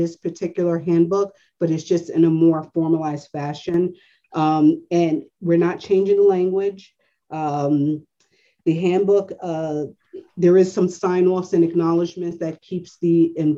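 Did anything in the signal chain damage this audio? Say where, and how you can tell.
Yes. From 3.69 to 3.74 s and again from 12.10 to 12.31 s, the sound abruptly sags by about 6 dB, then snaps back. That is one channel dropping out, likely at a loose analogue connection, leaving the mono sum with half the shared signal.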